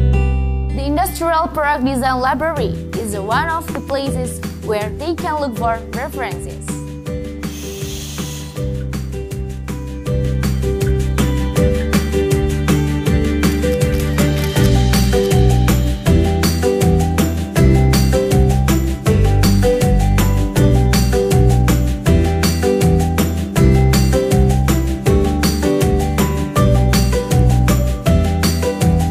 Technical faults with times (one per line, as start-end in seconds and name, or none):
3.75-3.92 loud pop